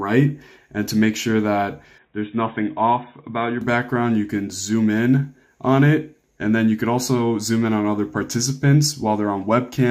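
From 1.98 to 3.61 s the sound drops to a narrower, duller band with nothing above 3.8 kHz, comes in a bit quieter, and has its own background noise sitting well underneath. The cause is likely an input switched to a poorer device, with no gap at either changeover.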